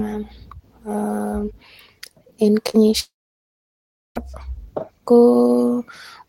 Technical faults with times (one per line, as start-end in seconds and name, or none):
2.69-2.76 short concealed packet loss
3.00-4.17 long network dropout